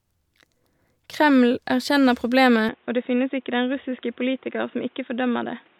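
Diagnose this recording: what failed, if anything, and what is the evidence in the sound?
At 2.69 s the speech turns dull and boxy through to the end, with nothing above 3.8 kHz, a level drop of about 5 dB and new background noise some 35 dB down. There is no gap at the change. The likely cause is an input switched to a poorer device at the driver stage. A codec bandwidth cut would not bring its own noise floor and level shift.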